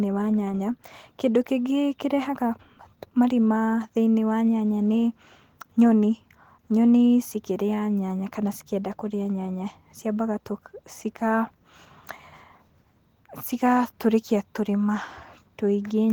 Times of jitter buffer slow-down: none

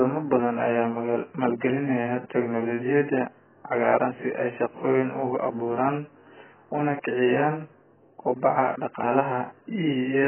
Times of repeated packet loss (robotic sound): none

